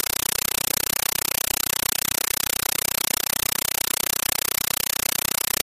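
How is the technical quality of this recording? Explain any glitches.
Pretty rough, I'm afraid: the speech is entirely buried under a compressed stream played as audio, running the whole way through. What's coming down the link is an AC-3 bitstream that got treated as plain samples instead of being decoded. Each frame comes out as an 8 ms blast of noise followed by silent padding, 31.25 times a second, which fits a 384 kbps stream. You hear it as harsh, very loud chattering static in place of the speech.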